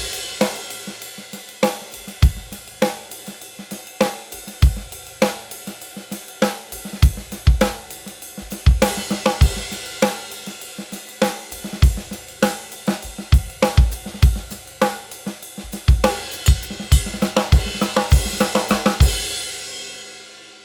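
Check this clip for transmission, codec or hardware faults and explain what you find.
No transmission, codec or hardware fault can be heard anywhere in the recording.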